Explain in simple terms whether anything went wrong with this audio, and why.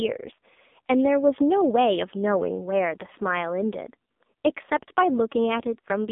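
AMR narrowband mobile codec, throughout the clip: the speech was squeezed through an old-style phone codec that keeps only sound between about 200 Hz and 3.6 kHz and rebuilds the voice from a rough model, so it sounds muffled, buzzy and heavily synthetic.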